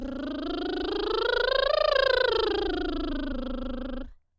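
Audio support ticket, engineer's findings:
Music clip reviewed in full, no faults found.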